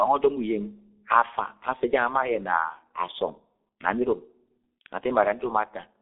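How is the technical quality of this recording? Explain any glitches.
The technical quality is poor, limited by one low-rate speech codec across the whole clip. The G.723.1 codec runs throughout. It models the voice in coarse 30 ms frames at a very low bitrate, consistent with roughly 6 kbit/s. Heavy damage: the line passes only about 250 Hz to 3.6 kHz, nothing above 3.8 kHz survives, and slow model updates leave the speech muffled and hoarse, with smeared consonants.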